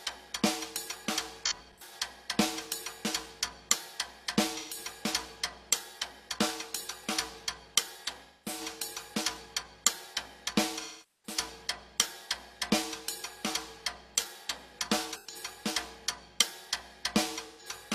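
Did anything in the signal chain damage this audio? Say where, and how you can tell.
Yes, at the codec stage: AAC frame loss with concealment at 1.46–1.92, 4.57–4.77, 8.24–8.61, 10.80–11.37, 15.14–15.35 and 17.46–17.66 s. The shorter patches sound smeared, noisy or phasey. On a spectrogram the detail blurs into frozen, grainy bands repeated from the last good spectrum, and the waveform loses its sharp transients. Gaps come in steps of about 43 ms, which fits whole dropped frames. The first loss is scattered, with runs up to about 100 ms. The 10.80 s gap is longest, near 430 ms.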